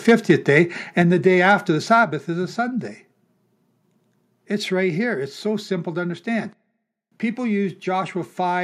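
It's a speech clip, and right at the start, from about 0.08 to 0.58 s, the peaks flatten and pick up a harsh, crackly edge on the loudest syllables. That's microphone overload: the signal is pushing about 4 dB past full scale, so the tops of the waveform get sheared off at the converter's ceiling, and roughly one percent of the samples end up clipped. The likely cause is simply that the mic input was set too hot for how loudly the talker was speaking. Shortly after that, the whole level drops twice in single clean steps, with the voice and the background going down together. The first step comes at 1.02 s, just before "the day," and is about 4 dB. The second comes at 2.04 s, right before "is a," and is about 5 dB. That's the microphone volume being stepped down, where the call software likely reacts to the earlier distortion and pulls the device's input volume lower in one go rather than easing it down.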